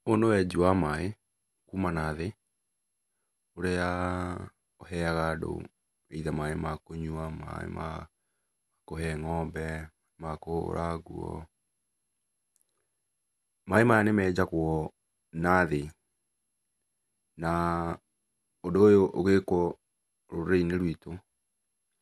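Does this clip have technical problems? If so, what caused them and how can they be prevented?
Yes. Throughout the speech there is generation loss: the audio was likely decoded and re-encoded about five times through a lossy codec, consistent with MP2 at 128 kbit/s. Each pass requantised on a shifted frame grid, so noise built up into a swirly, hollow, smeared sound with blurred attacks and nothing above 12.6 kHz. To prevent it, edit from a lossless master and encode to a lossy format only once, as the final step.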